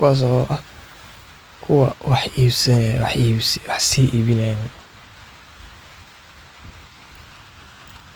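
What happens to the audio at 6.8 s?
At 6.8 s the speech carries the plainly audible grain of what is likely Opus compression, present through the whole clip. The band energies are kept, but starved bands get filled with folded or noise content, so tones sound rough and noisy, which fits a low rate around 24 kbps.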